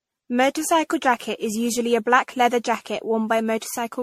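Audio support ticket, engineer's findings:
Generation loss, whole clip: swirly, hollow speech with smeared consonant attacks, nothing above 16.4 kHz. Likely repeated MP3 re-encoding, around fifteen passes near 64 kbit/s, each on a shifted frame grid, so quantisation noise and spectral holes stack up.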